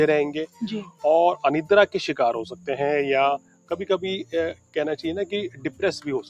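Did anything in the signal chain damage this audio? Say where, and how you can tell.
Yes. Throughout, sustained parts of the sound sag and swell while sharp onsets punch through, giving a pumping, thinned-out character with level swings of around 15 dB. This comes from call processing: a speech-tuned noise suppressor was applied to music or sounds, treating steady tones and tails as noise.

Six spots sink in level: 0.47–0.62 s, 0.83–1.04 s, 2.48–2.68 s, 3.38–3.74 s, 4.54–4.76 s and 5.50–5.82 s, falling by about 10 to 18 dB. Here the sound was cut by the noise suppressor, which misjudged it as noise and clamped it down.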